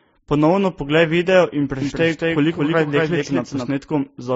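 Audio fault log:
throughout, transcoding between lossy codecs: layered swirly, smeared artefacts, likely from a low-bitrate AAC pass re-encoded as MP3; the spectrogram shows a hard ceiling at 7.7 kHz and blotchy highs.
1.82–3.68 s, doubled audio track: the speech is joined by a copy about 5 dB quieter, trailing by about a fifth of a second, likely from a second, slower capture path. It starts and stops abruptly, and the waveform shows offset repeated envelopes.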